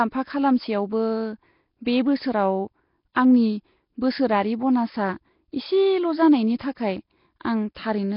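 A speech recording with a rough, hissy halo and a smeared, underwater quality over its whole length, and nothing above 5.3 kHz. That heavy damage is likely Nellymoser compression, the old Flash microphone codec, at a rate that fits roughly 22 kbps: it starves weak bands of bits and fills them with noise. At 7.40 s a sharp attack is preceded by a brief hiss lasting about 11 ms, and the onset sounds softened. That is pre-echo, where the codec spreads noise meant for the loud attack back into the quiet moment just before it.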